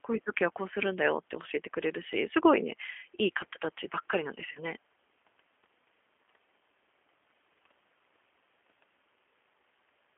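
G.729 codec coding runs throughout this speech clip: the sound is confined to a telephone band of roughly 250 Hz to 3.4 kHz, with a plainly audible rough, slightly synthetic edge, which fits 8 kbit/s G.729A rebuilding the voice from a vocal tract filter, pitch predictor and sparse pulses. VoIP packet loss concealed by the speech codec appears at 4.52 to 4.60 s: about 30 ms of audio goes missing, consistent with a single lost packet, and the decoder stretches the last pitch and filter into a fading fill of buzzy tone or coloured noise whose disturbance lingers briefly after the stream resumes.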